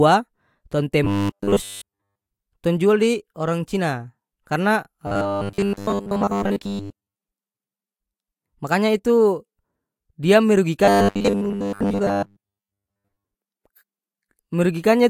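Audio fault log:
1.05–2.27 s, 5.07–7.21 s and 10.85–13.26 s: robotic sound from repeated short buffers. In all three stretches the speech turns into a stiff, metallic buzz at 100 Hz. The buzz roughly tracks the speech. The likely cause is fresh audio arriving too seldom, with a 10 ms chunk replayed to fill each gap. Most of the real audio is skipped, and the steady repeat rate imposes the fixed buzz.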